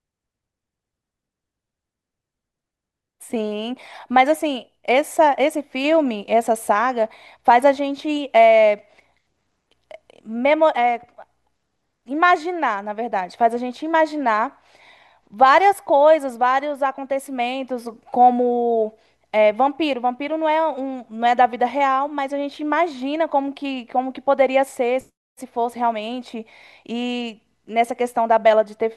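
No technical faults can be heard anywhere in the recording, and the signal holds steady throughout.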